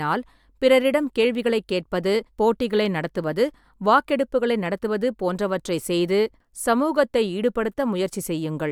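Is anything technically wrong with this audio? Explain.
No, nothing technically wrong can be heard in this speech recording, and the signal stays intact and continuous throughout.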